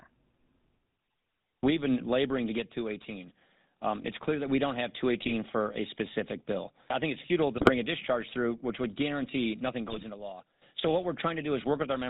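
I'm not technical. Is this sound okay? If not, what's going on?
No. The whole recording has passed through the old GSM full-rate codec, the system early mobile phones used. It rebuilds speech from a simplified model driven by regular pulses and drops everything above 4 kHz, so voices sound muffled and buzzy, with a gravelly edge throughout.

There is loudspeaker feedback squeal twice. The microphone is picking up its own loudspeaker, and one pitch, near 4.1 kHz, keeps amplifying itself around that loop. The first squeal swells quickly, within about half a second, from 2.28 to 3.60 s. The second starts after "a discharge through" and grows more slowly, over roughly a second and a half, lasting from 8.65 to 10.65 s.

There are also GSM bit errors: damaged data reaching the phone's decoder, which turns the settings for a few short slices of sound into nonsense. The result is brief squawks and gargling. 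These occur at 5.22 to 5.33 s, between "that we don't have" and "for a specific bill". They recur at 7.56 to 7.70 s, between "I think it's futile" and "a discharge through", and at 9.88 to 10.05 s, during the second squeal.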